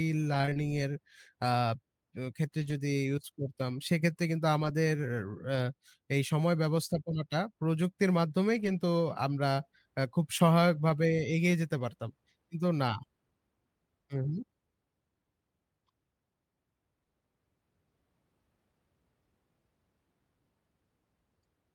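A speech clip with two kinds of packet loss. From 0.33 to 5.57 s there are scattered short gaps, about five of them, none longer than roughly 20 ms. Only about 100 ms of sound is missing, patched over 140 ms by extending the preceding sound. The result is brief ticks and smears. A lost packet rebuilt from error correction appears at 8.55 to 8.69 s and again at 11.79 s. There is no gap. The following packets carried low-bitrate copies, so 80 ms and then 20 ms play back rougher and noisier, which fits several lost packets and then one.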